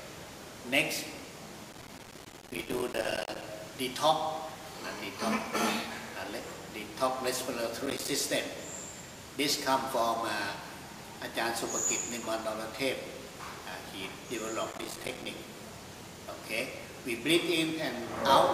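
Processor overload crackle appears three times: from 1.73 to 3.44 s, from 7.86 to 8.10 s, and from 14.70 to 15.26 s. Each time the processor falls behind and misses a run of small buffer deadlines, each buffer around 5 ms, which points to a short-buffer setup. Every missed buffer drops out as a brief hard-edged silence. In rapid succession these gaps become a gritty, tearing crackle over the sound, longest in the first burst, then stopping when the load passes.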